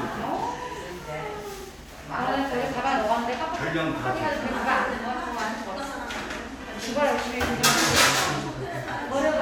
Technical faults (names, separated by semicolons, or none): none